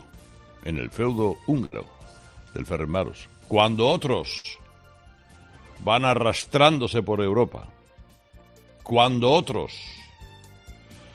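A burst of packet loss interrupts the audio twice, at 1.65 s and 4.38 s. Each time the receiver stretches the last sound for about 60 ms, fading it out, then resumes with about 60 ms of the original audio missing.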